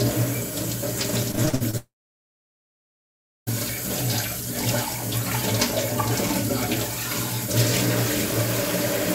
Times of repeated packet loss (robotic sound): 1.31-1.75

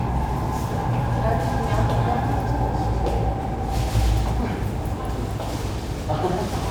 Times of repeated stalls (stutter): none

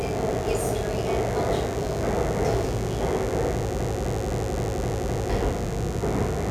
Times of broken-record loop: 3.79-5.29

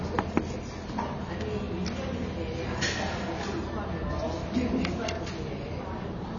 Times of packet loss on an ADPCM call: none

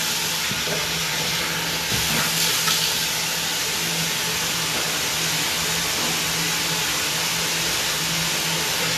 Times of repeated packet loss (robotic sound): none

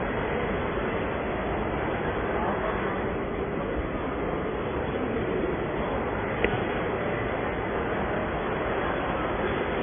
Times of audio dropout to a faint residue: none

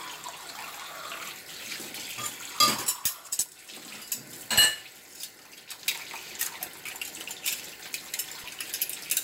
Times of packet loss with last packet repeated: none

